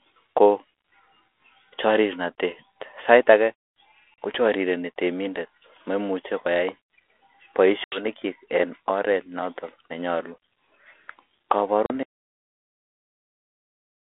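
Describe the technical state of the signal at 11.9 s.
At 11.9 s you're right inside a packet-loss dropout on the ADPCM call, running 11.86 to 11.97 s. About 40 ms of audio, a couple of packets' worth, goes to a hard-edged silence, and the 32 kbit/s G.726 decoder loses track of the sender's predictor and step size, so the speech returns with a bit of distortion.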